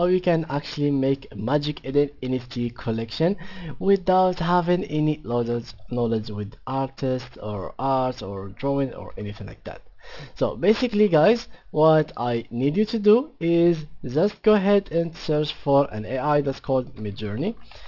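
Aliasing runs through the whole clip. The sound points to a sample-rate drop to about 12 kHz with no low-pass filter, so content above the 6 kHz fold mirrors back into lower, unrelated frequencies, sitting roughly 25 dB down and adding a gritty, metallic edge.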